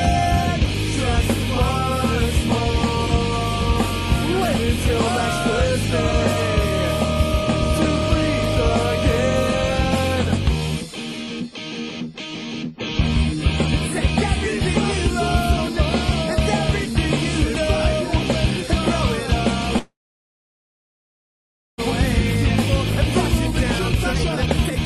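A call audio freeze runs from 19.79 to 21.80 s. The sound stops moving forward, a brief fading continuation of the last moment trails off, and then about 1.9 s of silence follows before the audio resumes exactly where it halted, with nothing skipped. The likely cause is packets held up in transit, draining the jitter buffer so the receiver had nothing new to play and bridged the wait, adding about 2 s of delay.

A jitter buffer speed-up follows from 23.40 to 24.85 s, as the receiver works off a buffer holding more audio than it aims for. It trims many short pitch-period-sized slices in succession, so the audio plays at about 141% speed while keeping its original pitch. Roughly 0.7 s is cut out over that stretch, and the passage sounds noticeably rushed and compressed in time rather than higher or squeakier.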